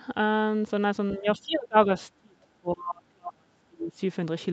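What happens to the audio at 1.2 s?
From 1.17 s to 1.89 s the speech drops out in broken stretches, by roughly 30 dB at its deepest and over about half a second in total. This is likely speech suppressed in double talk: the echo canceller mistook the talker for loudspeaker echo and attenuated it.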